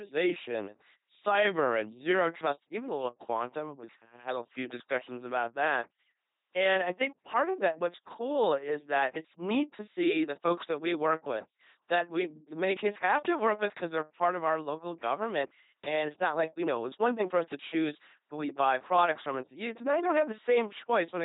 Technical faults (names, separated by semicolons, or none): LPC-10 vocoder